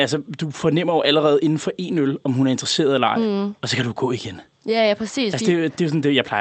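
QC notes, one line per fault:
Nothing to flag on this speech clip; it comes through a normal call path whose high end tops out around 8 kHz, which fits an Opus link running at about 32 kbps.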